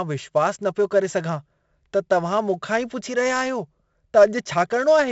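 From start to finish the speech carries the heavy grain of 4-bit ADPCM compression. Each sample is coded as a coarse 4-bit step from a predicted value, with the step size adapting as it goes. The resulting error tracks the signal level, so a gritty hiss rides on every louder passage and sharp onsets come out roughened. The band stops at about 7.7 kHz, dulling the top end, which fits a 64 kbps stream.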